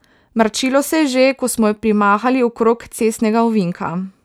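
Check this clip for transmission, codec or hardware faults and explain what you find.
No transmission, codec or hardware faults are audible anywhere in this speech recording.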